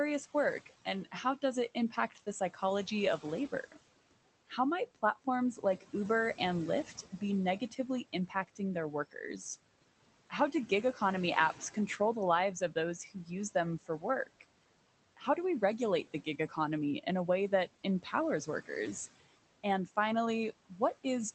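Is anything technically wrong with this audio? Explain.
Yes, there are two related faults, both from noise suppression.

Noise suppressor artifacts run through the whole clip. The suppressor estimates the steady background frame by frame and pulls those bands down by about 17 dB. The room noise, which sits about 19 dB below the speech, drops away in the gaps and comes back up under each phrase.

Speech cut by the noise suppressor happens in two stretches. The first runs from 0.66 s to 18.7 s, with roughly two seconds of speech affected in total and the deepest drop about 18 dB. The second runs from 19.64 s to the end, with drops of up to about 14 dB. In these stretches the suppressor misclassifies quiet speech energy as noise and attenuates it with the background. Soft consonants and word tails sound swallowed or faded, as if clipped short.

Both faults sit on top of the Opus call path. 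Its band limit at 8 kHz is audible as a loss of top-end air.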